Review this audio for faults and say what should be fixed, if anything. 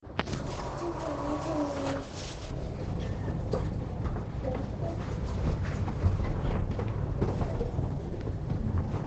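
Through the whole clip the audio sounds muffled and hoarse, with nothing above about 8.9 kHz. This is likely Opus compression at a very low rate, with the damage pointing to roughly 12 kbps. At that rate the encoder drops into its speech-oriented SILK mode in wideband, which limits the bandwidth and models the signal coarsely instead of keeping detailed band energy. Prevention: encode at a higher bitrate so Opus stays in its full-band music mode.

From 2.51 s to the end, a further treble loss sets in. The response tilts smoothly downward toward the highs, about 11 dB lower at 10 kHz than at 1 kHz, so the already narrow sound becomes duller still. This is de-emphasis applied wrongly: a high-frequency cut meant to reverse pre-emphasis has been applied to material that was never pre-emphasised, or applied a second time. Prevention: confirm whether pre-emphasis was used and apply the matching de-emphasis exactly once.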